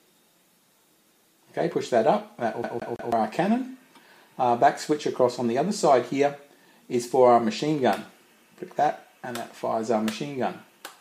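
From 2.64 to 3.12 s the sound stutters quickly and evenly, the same 163 ms fragment playing three times with a brief mute at each jump. This is a CD stuck on one turn: a scratch keeps throwing the laser back one track.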